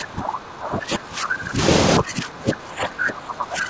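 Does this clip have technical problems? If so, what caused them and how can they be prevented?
Yes. The speech is pulled down from 0 to 1.6 s and again from 1.99 to 3.69 s, dropping by roughly 20 dB and then roughly 25 dB. This is speech suppressed in double talk: the likely cause is that both ends spoke at once, so the echo canceller could not separate this talker from loudspeaker echo and attenuated everything. On a waveform the envelope sags. On a spectrogram the harmonics thin out or vanish in patches, below a band that already stops near 8 kHz from the call path. Better double-talk detection in the echo canceller, a headset, or lower loudspeaker volume would prevent it.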